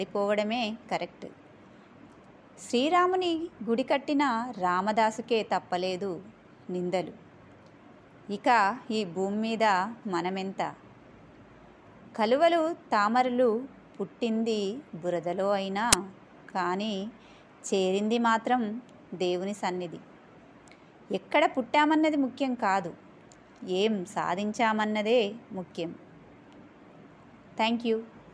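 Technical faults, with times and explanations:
15.93 s: file tags played as audio. A block of compressed data, in this case the embedded cover picture, is read by the decoder as if it were sample values, producing a single burst of very loud white noise lasting about 9 ms. Compressed image bytes are effectively random, so the samples jump across the entire range with no structure, and the burst starts and stops abruptly with hard edges, heard as a short crack of static.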